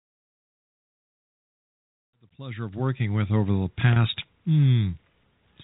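At 3.93 s, just after the fade-in completes, there is packet loss with pitch repetition. About 30 ms of audio is missing, consistent with a single lost packet. The receiver repeats the last pitch period to fill the gap. It sounds like a brief, held, buzzy tone.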